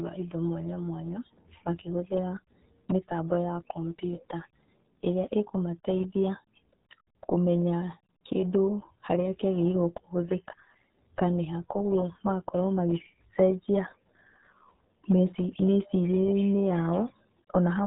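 RealAudio 14.4 codec damage runs throughout: the speech is squeezed through an 8 kbit/s dial-up encoder, nothing passes above 3.8 kHz, and heavy gargly, muffled artefacts result.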